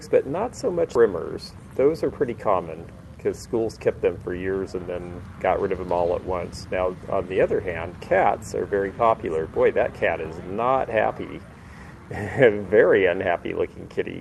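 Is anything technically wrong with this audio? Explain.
Yes. At 0.95 s there is a skip ahead. Roughly 400 ms of audio was dropped, and playback jumps forward with no gap filling the join. From 1.05 to 2.56 s comes a jitter buffer speed-up. The receiver trimmed short pitch-period pieces, around 200 ms in total, so the sound runs about 12% fast at the same pitch. The call codec path limits the top end to about 12 kHz, which fits Opus at 32 kbps.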